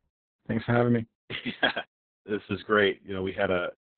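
From start to finish the speech carries heavy Opus voice compression. Nothing is heard above about 4.2 kHz, so the band has been cut to narrowband, and the coarse SILK linear-prediction coding, which fits a rate near 6 kbps with long 60 ms frames, leaves the excitation crudely quantised. The result sounds muffled, hoarse and slightly robotic, with the top end gone.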